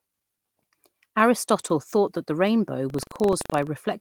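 From 2.86 to 3.70 s, buffer tearing splices a sliver of audio about 150 ms stale into each period, producing a 23.4 Hz rattle that fits a 2048-sample buffer.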